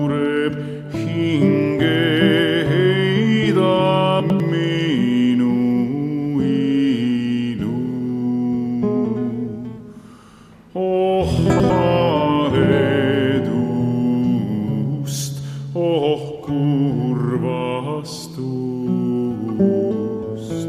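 Chunks out of order at 4.2–4.4 s and 11.5–11.7 s: two 100 ms blocks play swapped, giving jumbled audio and three waveform discontinuities, seen as vertical spectrogram click lines.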